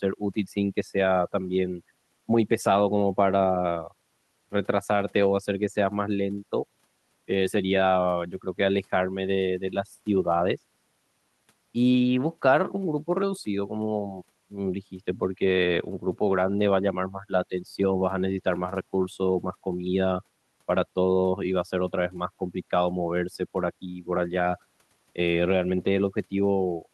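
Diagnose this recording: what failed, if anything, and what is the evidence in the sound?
Nothing failed; no stage leaves audible evidence of trouble.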